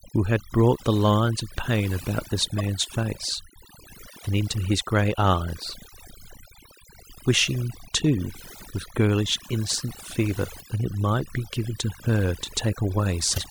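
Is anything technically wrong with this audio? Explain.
Yes. Throughout the speech, the background drops and breaks up into twinkling, glassy specks. This is overdone noise removal: the reduction was set so strong that it drives individual frequency bands down whenever they approach its noise estimate, taking quieter parts of the voice with them.

Three brief glitches occur at 2.58–2.61 s, 10.57–10.62 s and 13.34–13.38 s. These come from damaged data in a compressed stream: corrupted bytes cause the decoder to misread frames, lose sync and jump ahead to the next valid frame header.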